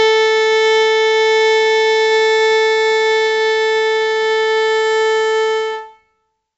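A gritty hiss rides on every loud passage throughout the music, rising and falling with the level, with roughness on sharp attacks and nothing above about 7.8 kHz. This is heavy 4-bit ADPCM compression, which fits a 64 kbps stream at a reduced sample rate.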